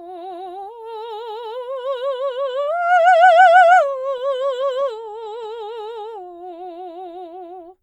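From 3.99 to 5.48 s the music shows scattered short gaps. About seven packets arrived late or not at all. Each hole, the longest around 15 ms, was filled by extending the preceding sound. Brief ticks and small smears result.

A jitter buffer slow-down follows from 5.82 to 7.08 s. The receiver stretched the audio to rebuild its reserve, repeating short stretches and adding 93 ms. Playback runs at 93% speed with unchanged pitch, so the music sounds slightly drawn out.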